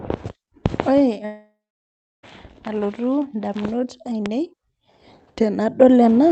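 Speech clip with a long network dropout from 1.25 s to 2.25 s. At 1.25 s the last sound is stretched into a buzzy continuation that fades out, followed by about 0.68 s of near-silence, and the audio resumes at 2.25 s with roughly a second of material missing. This is likely packet loss on the call link, with the receiver's concealment filling the gap. The surrounding audio, cut off above 8 kHz, fits an Opus call stream.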